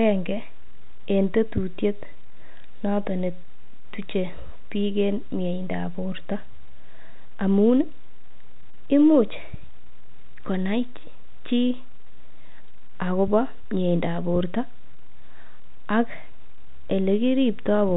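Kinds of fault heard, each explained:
Nothing stood out as a fault on listening to this speech.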